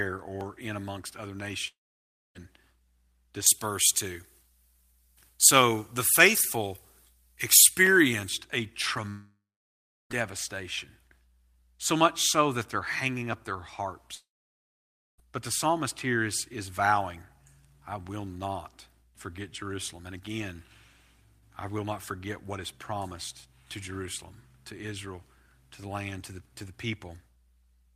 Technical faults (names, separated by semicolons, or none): long network dropout; pre-emphasis left on